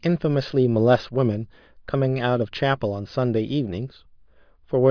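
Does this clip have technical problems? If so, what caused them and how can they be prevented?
No, nothing in this clip stood out as a technical problem on listening, so there is nothing here to trace back or prevent.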